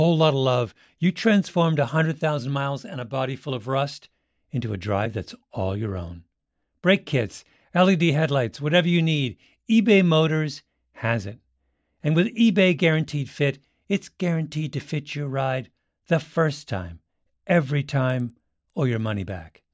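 Resampler restarted on every block, from 18.1 s to 19.73 s, just after "the first time every": each 100 ms block was converted from 24 kHz to 16 kHz in isolation, missing its neighbours' samples, so every edge carries an error heard as ticks at 10 Hz under the speech.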